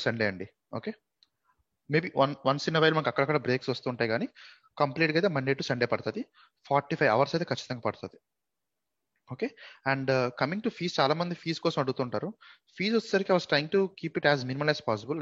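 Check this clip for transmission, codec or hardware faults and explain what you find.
No faults turn up on checking this clip.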